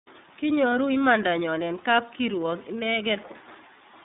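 The speech here has passed through the iLBC codec for its full length. Nothing appears above about 3.8 kHz, so a spectrogram shows a hard empty ceiling, with thin energy below 150 Hz. Each frame is coded independently, which fits 30 ms frames at roughly 13.3 kbps, and plainly audible roughness results.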